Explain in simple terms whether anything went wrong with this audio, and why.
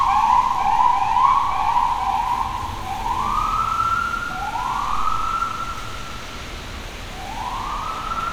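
Nothing went wrong with this recording of sounds, and no technical fault can be heard anywhere in it.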